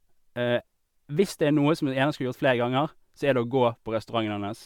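From start to finish, the speech carries generation loss. It sounds swirly, smeared and hollow, like audio pushed through a lossy codec again and again, likely MP3 re-encoded about seven times. Each pass quantised on a fresh frame grid, so new noise and spectral gaps stacked on the old ones. The damage is worse than one encode near 130 kbit/s would leave. Consonant attacks blur. Nothing sounds above 20.1 kHz.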